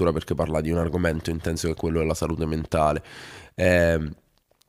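Nothing technical goes wrong anywhere in this bit of speech, so there's no fault to point to.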